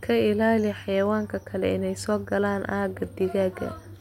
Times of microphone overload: none

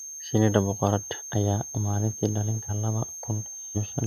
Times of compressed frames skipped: 1.16-1.22, 2.65-2.71, 3.72-3.77

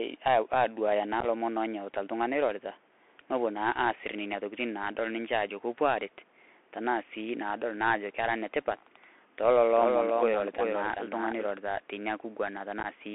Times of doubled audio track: 9.76-11.46

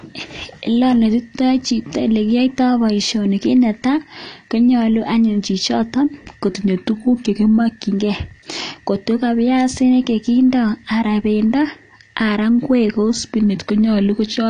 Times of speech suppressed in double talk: none

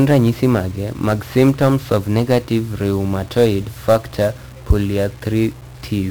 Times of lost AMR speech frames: none

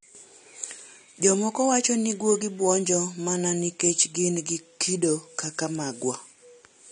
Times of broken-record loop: none

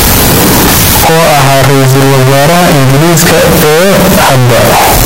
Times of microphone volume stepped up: none

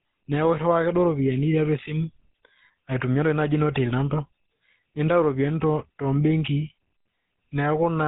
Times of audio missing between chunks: none

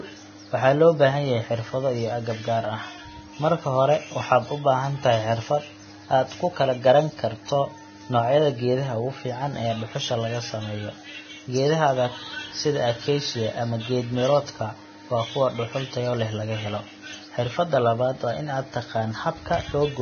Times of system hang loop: none

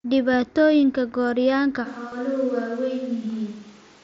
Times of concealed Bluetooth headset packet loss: 0.82, 2.10-2.12

